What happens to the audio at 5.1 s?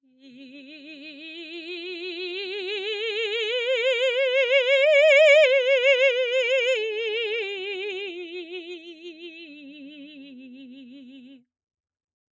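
At 5.1 s the music is still under the noise suppressor applied to music or sounds that runs through the whole clip. A suppressor built for speech treats sustained tones, ambience and reverb tails as noise and pulls them down, while attacks pass through largely intact. Held material and decays keep dipping by roughly 5 dB, so the music pumps and thins rather than sustaining evenly, against a top end that stops around 8 kHz from the call processing.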